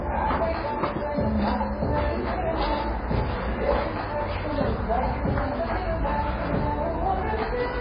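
All the way through, the sound stops dead at 5 kHz and goes watery and swirly, which is likely heavy MP3 compression at a very low bitrate, around 16 kbps.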